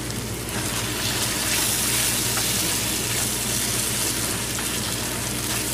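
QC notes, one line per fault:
Throughout: mains hum, a steady 60 Hz tone sitting roughly 10 dB below the audio. Power-line current is leaking into the signal path through a ground loop or a nearby transformer, so the line frequency rides underneath everything as a constant low drone.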